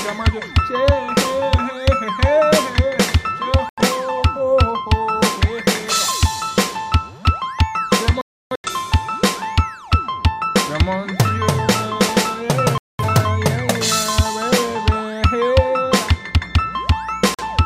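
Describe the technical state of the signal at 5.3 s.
At 5.3 s the signal is intact, with no dropout, clipping, glitch or other fault audible at that moment.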